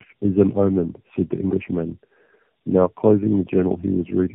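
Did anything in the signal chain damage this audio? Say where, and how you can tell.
Yes, tandem speech coding at the codec stage: rough, muffled, warbly speech throughout, nothing above 3.6 kHz, and worse than any one coder, which points to three speech codecs re-encoding in a row.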